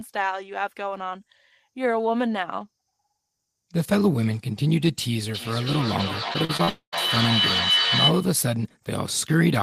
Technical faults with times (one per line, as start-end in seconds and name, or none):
5.34-8.44 feedback howl
6.33-6.69 repeated packet loss (robotic sound)
6.69-6.94 long network dropout